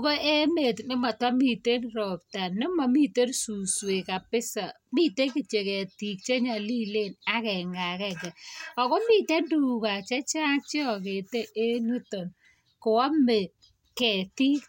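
Listening through this speech recording, nothing stood out as a technical fault at any point.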